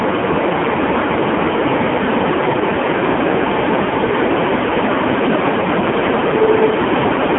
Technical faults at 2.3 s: AMR narrowband mobile codec

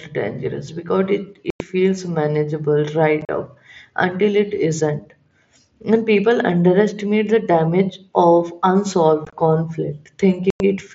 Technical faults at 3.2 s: unconcealed Bluetooth headset packet loss

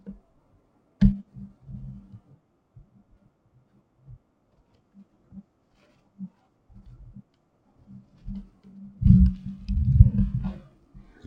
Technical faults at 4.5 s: stereo read as mono

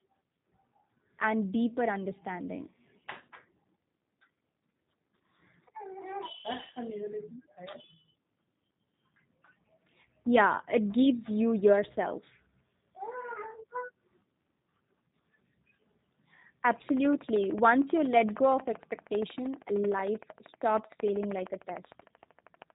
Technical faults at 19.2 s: G.729 codec; train of clicks

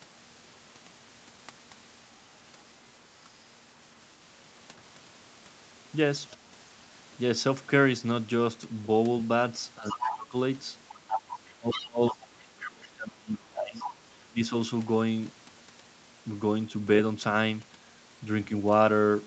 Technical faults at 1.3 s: none

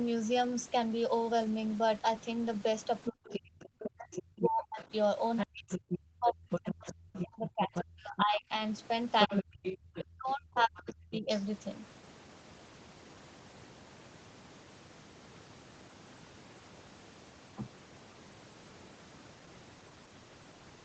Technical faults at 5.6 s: other side's voice leaking through; speech suppressed in double talk

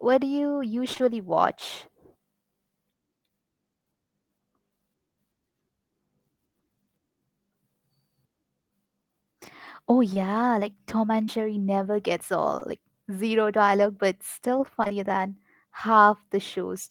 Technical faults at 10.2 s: short concealed packet loss

